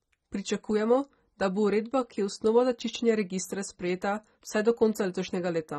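Throughout, the speech sounds dull and smeared. Nothing reaches above 15 kHz. Sibilants turn fizzy, and sustained sounds warble. This is likely AAC compression. The damage is plainly audible and fits AAC-LC at a low rate near 24 kbps, starving bands and leaving spectral holes.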